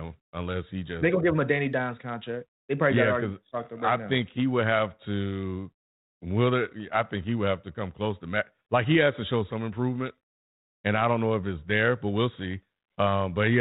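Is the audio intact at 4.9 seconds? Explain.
Yes, the speech at 4.9 s is intact, with no fault at that moment beyond the band-limited character of the 32 kbit/s G.726 ADPCM telephone coding that runs through it.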